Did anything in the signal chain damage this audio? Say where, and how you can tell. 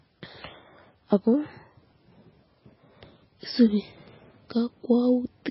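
Yes, at the codec stage, and it runs through the whole clip: nothing survives above 5.6 kHz and the speech has a watery, swirly texture. That's likely MP3 compression at a very starved bitrate, something near 16 kbps, with the encoder chopping the treble and dropping weak frequency lines.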